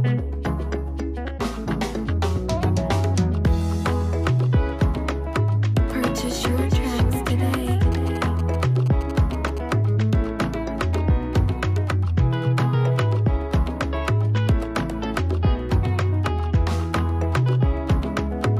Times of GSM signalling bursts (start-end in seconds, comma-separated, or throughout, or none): 7.92-9.59